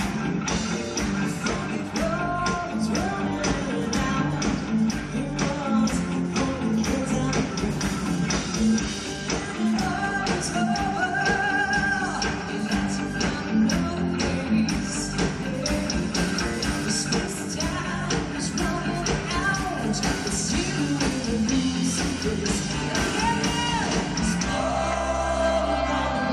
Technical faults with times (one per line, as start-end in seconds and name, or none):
none